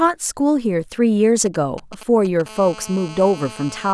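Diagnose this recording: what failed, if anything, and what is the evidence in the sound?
The analogue wiring picked up GSM signalling bursts from a nearby 2G phone. Diodes in the audio circuit rectified the radio pulses. From 1.46 to 2.42 s this puts a galloping dit-dit-dit of short 217 Hz buzzes under the speech, roughly 20 dB down.

From 2.46 s to the end, a nearby 2G phone is in a call and bursts steadily, so the analogue stage rectifies a continuous GSM phone buzz. It is a hard, raspy 217 Hz tone, rich in harmonics and unrelated to the speech, about 19 dB below it.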